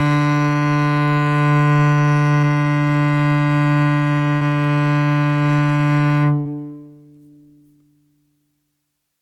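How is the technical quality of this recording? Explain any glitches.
The music has three brief glitches, all short concealed packet loss, at 2.41 to 2.45 s, 4.37 to 4.43 s and 6.41 to 6.47 s. The first covers about 20 ms of missing audio, the other two about 40 ms each. The receiver bridged each hole by extending the preceding sound and then blending back into the real signal, so you hear a quick smear or wobble rather than silence. That filled-in continuation distinguishes it from a plain dropout, which would leave an abrupt mute or hard click.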